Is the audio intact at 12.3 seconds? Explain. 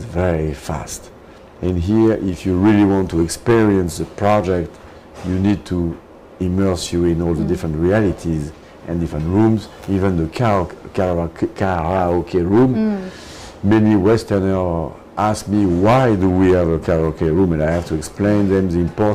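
Yes, at 12.3 seconds the audio plays through intact, with no dropout, click, distortion or other fault at that moment.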